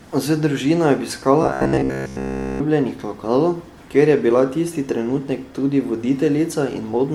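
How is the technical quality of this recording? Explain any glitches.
The technical quality is poor, with two audible problems.

Throughout the speech there is a swirly, hollow, smeared character, with blurred attacks. This is likely generation loss: repeated MP3 re-encoding, pointing to roughly 96 kbit/s several times over, with each pass adding fresh quantisation noise and spectral holes.

From 1.43 to 2.61 s the voice turns into a rigid, metallic buzz at 66.7 Hz. This is robotic sound from repeated short buffers, likely caused by a roughly 15 ms chunk being replayed in place of nearly all the real audio, which imposes that fixed pitch.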